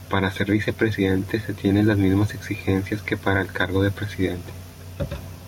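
Gain pumping runs through the whole speech recording. The level breathes in and out. The swing is around 5 dB. The likely cause is input gain set far too high, with a fast limiter or compressor clamping down on every loud sound. Loud and quiet parts sit close together, so the sound feels squashed. The room noise itself sits about 44 dB under the speech.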